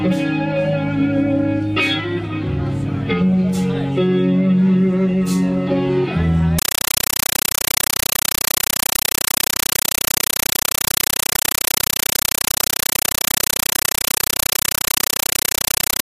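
Compressed stream played as audio takes over from 6.59 s to the end of the clip at 16.04 s, replacing the sound with very loud, chattering static. A Dolby Digital (AC-3) bitstream is being treated as ordinary samples instead of being decoded, so each data frame comes out as an 8 ms burst of noise followed by silent padding, repeating 31.25 times a second; the 8 ms burst length fits a 384 kbps stream.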